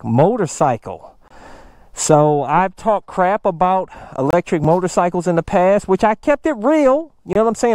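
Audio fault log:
1.28 s, 4.31 s, 7.33 s, gap between chunks: the sound stops dead for about 25 ms and resumes just as abruptly, three times at an even 3-second spacing. The hard-edged holes and the steady interval show that the audio was carried in 3-second chunks, with a short stretch of silence at each join, from padding or a late start on each new chunk. No sound is missing; it is interrupted at each boundary.
4.64 s, repeated buffer: just after the second gap, a tiny click-like stutter is heard as a very short slice of sound plays twice in a row with a hard join. Fresh audio did not arrive in time, so the device replayed the previous buffer once, and the length of the repeat points to a buffer of about 5 ms. Because the buffer is so small, the repeat is heard as a click rather than an obvious stutter, and only a few milliseconds of audio are displaced.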